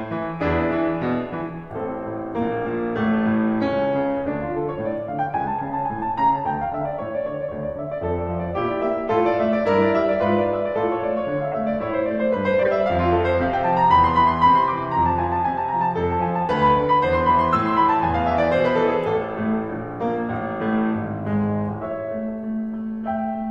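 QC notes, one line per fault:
11.51–11.54 s: corrupt frame decoded. A short chirp-like blip cuts across the music, peaking at around -15 dBFS and lasting about one codec frame. Damaged bits in the compressed frame were decoded as if valid, so misread gains and codes put energy at the wrong frequencies.
12.63–12.68 s: corrupt frame decoded. A slightly longer burst of the same squeaky, misplaced energy, again peaking near -15 dBFS, spans roughly two consecutive damaged frames.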